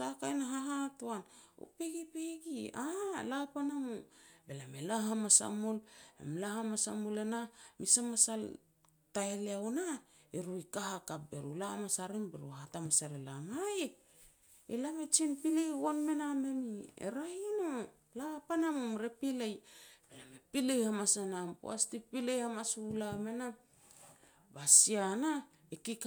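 Listening closely to the speech, nothing stood out as a technical problem at any point.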